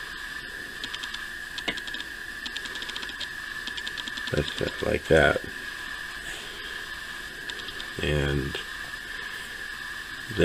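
No technical faults can be heard at any point in the audio.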